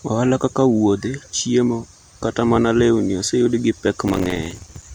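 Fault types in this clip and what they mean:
processor overload crackle: a gritty burst of crackle tears through the speech from about 4.08 to 4.84 s, right after "mana lewni oseyudo gi". The processor kept missing its deadlines for very short buffers, roughly 3 ms each. Each miss left a hard-edged gap of silence, and dozens of those gaps in a row make the crackle.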